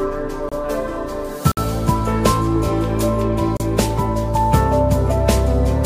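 You get three hard-edged dropouts from a gap between stream segments: at 0.49 s for about 28 ms, at 1.52 s for about 56 ms, and at 3.57 s for about 31 ms. The segment timestamps don't quite meet, so the player plugs each hole with silence. Nothing's actually lost; the sound just stops and restarts, falling on what looks like one-second segment boundaries.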